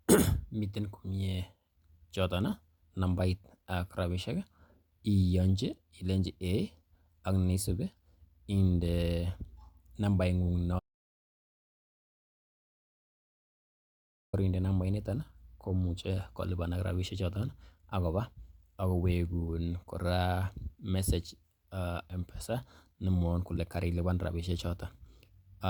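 At 10.79 s the speech stops dead and silence holds until 14.33 s, an audio dropout to silence lasting 3.54 s. The input was likely lost while the recorder kept writing silence. The waveform goes flat and the spectrogram blank, with no room tone.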